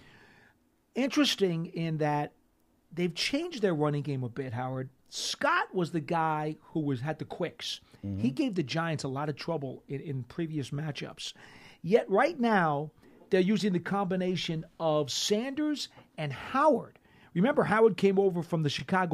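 Speech with overlapping chunks: about 21 ms of audio replays at 2.71, 6.73, 10.75, 14.77 and 18.79 s, a stutter every 4 s where consecutive chunks overlap, not dropout gaps.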